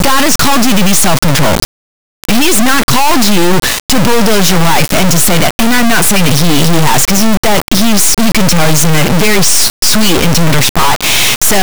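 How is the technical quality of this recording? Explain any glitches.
The technical quality is very poor: the entire speech clip is corrupted by a single format fault.

Integer read as float, present throughout: samples stored as 32-bit integers are being interpreted as 32-bit floats. Most of those bit patterns decode to values either vanishingly small or enormously beyond full scale, so the output slams between silence and the clipping ceiling. The result is a brutally loud, buzzing square-wave texture that cuts to silence in quiet stretches. Unlike ordinary overload clipping, no recognisable speech waveform survives beneath the distortion.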